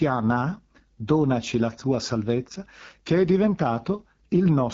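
From start to finish the speech carries AMR wideband (HD Voice) codec damage, sounding rough and raspy, which fits the low 8.85 kbit/s rate, with nothing above 7.5 kHz.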